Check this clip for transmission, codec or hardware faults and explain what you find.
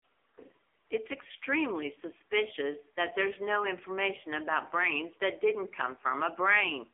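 One fault runs through the whole clip: an AMR narrowband mobile codec. The speech has been squeezed through AMR-NB from start to finish, with the band held to roughly 300 Hz to 3.5 kHz and nothing above 3.6 kHz. The codec rebuilds the voice from a vocal-tract model fed by sparse pulses, and the heavy damage points to a low mode around 6.7 kbps. The result sounds buzzy, thin and synthetic, with no air or sibilance.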